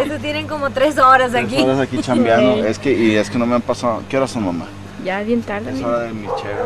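Nothing goes wrong anywhere in this audio, and there isn't a single technical fault to point to from beginning to end.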